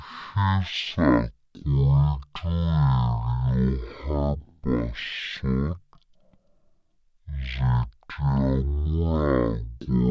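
It's a speech clip with a wrong sample rate problem running the whole way through. Everything plays at a third of normal speed and about 19 semitones low, so the voice drags into a slow, murky growl, which fits 48 kHz audio being played back at 16 kHz.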